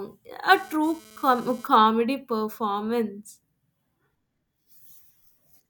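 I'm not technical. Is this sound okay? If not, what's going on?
No. From 0.52 to 1.76 s there's a harsh, raspy buzz underneath the speech. That's GSM phone buzz: a nearby 2G phone sending data in bursts about 217 times a second, which the audio equipment picks up as an electrical rattle.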